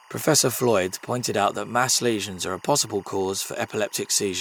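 Timecode bleed runs under the speech for the whole clip. Linear timecode from a neighbouring track or cable leaks in, its square wave flipping between tones near 1 and 2 kHz. The result is a faint, steady chirping warble well below the speech, with a repeat rate that fits 24-frame code.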